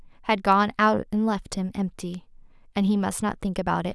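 At 0.52 s and again at 2.14 s, a single bit flips in memory or on a digital link, knocking one sample, then what sounds like a pair, off by a power of two before the values snap back. Each bit error spike is a lone, sharp tick peaking at about -23 dBFS, spread evenly across the spectrum and with no relation to the surrounding speech.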